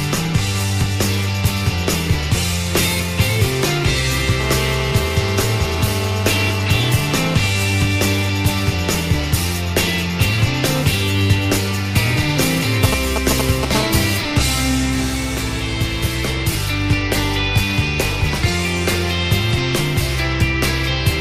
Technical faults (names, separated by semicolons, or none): GSM phone buzz; GSM signalling bursts